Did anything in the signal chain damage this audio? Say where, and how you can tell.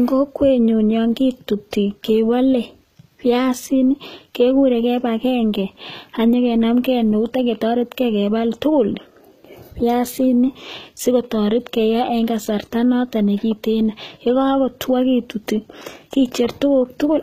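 Yes. Across the whole recording the speech has a bright but unnatural top end: s sounds come out gritty and lispy, and the treble has a metallic sheen that doesn't quite belong to the voice beneath it, with nothing at all above 14.8 kHz. The damage is at the codec stage, likely HE-AAC compression at a low rate around 20 kbps. Only the lower spectrum is truly coded, and the treble is rebuilt by copying lower bands upward, so its harmonics don't line up.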